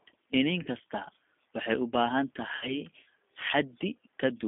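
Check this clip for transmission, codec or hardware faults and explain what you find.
Two faults are present: G.729 coding throughout the whole clip, and two dropouts covered by codec packet loss concealment.

The G.729 codec is active from start to finish. Speech is rebuilt from a vocal tract filter, a pitch predictor and a few pulses per frame. That gives a rough, synthetic texture, which points to an 8 kbit/s coder, and a narrow line from 250 Hz to 3.5 kHz.

VoIP packet loss concealed by the speech codec occurs at 0.63 to 0.68 s, where about 30 ms went missing, consistent with one lost packet. It occurs again at 2.56 to 2.80 s, with about 60 ms missing, fitting two packets. The decoder stretched its last pitch and filter into a fading buzzy tone or coloured noise, and the speech stays weak or distorted for a while after each gap.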